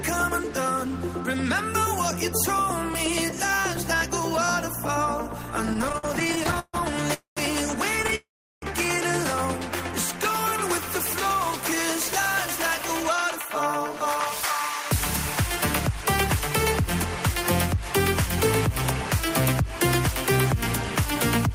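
From 5.73 to 6.76 s, repeated stalls (stutter) break the sound 19 times. Late packets drained the buffer. The receiver stretched what it had, so the sound drags and jerks. The longest hold is 143 ms. A shorter burst of three tiny stalls follows at 8.03 to 8.13 s.

A call audio freeze interrupts the sound at 7.14 to 7.39 s. Held sound fades into about 130 ms of silence, then resumes where it stopped. The likely cause is packets delayed in transit. A longer freeze at 8.15 to 8.64 s ends in about 370 ms of silence.

From 12.58 s to the end, a jitter buffer speed-up trims tiny slices to cut the built-up delay. The sound runs at 102% speed with unchanged pitch, shedding roughly a fifth of a second.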